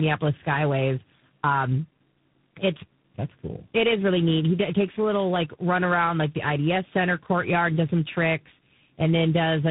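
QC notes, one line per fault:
Throughout: tandem speech coding. The speech passed through three separate speech coders in a row, each re-encoding the already damaged output of the one before. The character fits a chain ending in a G.726-style coder at a low bitrate, with a heavier CELP stage such as G.729A upstream. Errors stack up, so the speech turns gritty, muffled and warbly, and nothing survives above 3.8 kHz.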